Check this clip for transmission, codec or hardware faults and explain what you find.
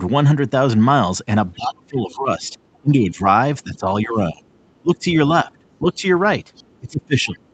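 Two echo-related faults are audible, both tied to a loudspeaker echo canceller struggling during the call.

Other side's voice leaking through: a faint second voice, well below the talker, appears at 1.54 to 2.13 s, 2.74 to 2.79 s, 4.53 to 4.8 s, 5.71 to 5.78 s, 6.54 to 6.79 s and 7.47 to 7.53 s. It is likely residual loudspeaker echo the canceller missed.

Speech suppressed in double talk: between 1.55 and 6.05 s, and again from 6.8 to 7.41 s, the talker dips by up to around 20 dB in patches. This is likely the canceller ducking everything while both sides overlapped.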